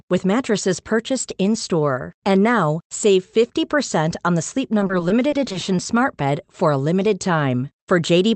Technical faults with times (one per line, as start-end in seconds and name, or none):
4.79-5.63 repeated packet loss (robotic sound)